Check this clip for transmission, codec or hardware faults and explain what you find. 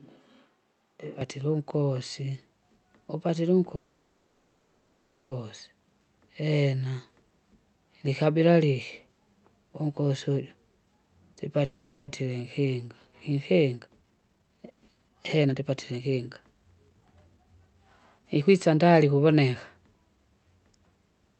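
Three kinds of fault are audible in this speech: a distant-microphone stretch, two call audio freezes, and two jitter buffer speed-ups.

From the start to 1.21 s, already under way when the clip begins, the sound is hollow and roomy, about 5 dB quieter, with noise roughly 30 dB below the speech. This is likely a switch to a distant microphone. The waveform is smaller, and the spectrogram shows thinner lows and a raised noise floor.

From 3.75 to 5.33 s and from 11.65 to 12.10 s, the sound stalls into a fading buzz, likely a call audio freeze where delayed packets emptied the jitter buffer. The first freeze fills 1.56 s and ends in 0.68 s of silence. The second fills 0.43 s. The spectrogram shows smeared, repeating bands, and then speech resumes with nothing lost.

From 12.22 to 17.75 s the speech runs at 131% speed, with about 1.5 s trimmed. From 18.18 to 19.49 s it runs at 116%, with about 0.2 s trimmed. 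This is a jitter buffer speed-up that removes pitch-period slices to shed the added delay. The pitch is unchanged, but syllables are compressed in time on both the waveform and the spectrogram.

Throughout the clip, the Opus call path cuts content above 8 kHz.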